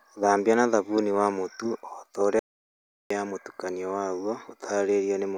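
At 2.39 s the speech drops out to silence, dead silence with no room tone, until it comes back at 3.10 s on "mũtukanio waguo". That's about 0.71 s gone. It's likely an audio dropout to silence, the input lost while the recorder kept writing zeros.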